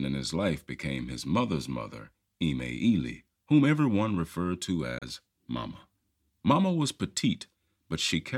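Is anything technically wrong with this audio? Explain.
Yes. At 4.98 to 5.02 s, just after "whom everyone referred to", the speech cuts to silence for about 30 ms. This is likely a Bluetooth dropout: late packets were discarded, and speech resumes as if it had continued.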